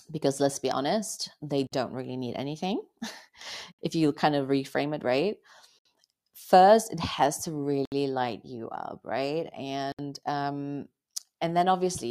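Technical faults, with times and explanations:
1.67–1.72 s, 3.72–3.79 s, 5.79–5.85 s, 7.85–7.92 s and 9.92–9.99 s: gap at a join of encoded pieces. The speech stops abruptly for 50 ms at the first join and 67 ms at the others, then resumes where it left off. The 2 s spacing points to chunks encoded separately and butted together untrimmed, so each join keeps the encoder's start-up delay and final-frame padding as a hole, its edges smeared.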